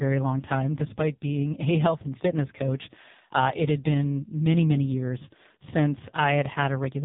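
From start to finish the speech carries the AMR narrowband mobile codec at a very low rate, which fits AMR-NB's 5.15 kbps mode. Each 20 ms frame rebuilds the voice from a vocal-tract filter fed by a few sparse pulses, so it sounds buzzy, thin and synthetic, with heavy damage throughout. On a spectrogram the energy stops at a flat ceiling near 3.7 kHz, and the harmonics look smeared and blocky frame by frame.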